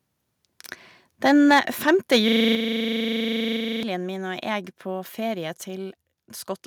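Speech, with a rough patch early on. From 1.26 to 1.59 s and again from 1.88 to 2.18 s the loudest syllables get a harsh, crackly edge, about 6 dB and 5 dB past full scale, with a small share of samples flattened. That's likely microphone overload, with input gain set too hot so the converter clips the peaks. Near the end of that first burst, at 1.54 s, the level drops by about 2 dB in one step, and at 2.55 s it drops again by about 6 dB, likely the call software stepping the microphone volume down when it saw clipping. Then from 2.28 to 3.83 s it turns into a steady 25 Hz buzz. That's a system hang loop: the machine stalled and the audio hardware kept replaying the same 40 ms buffer dozens of times.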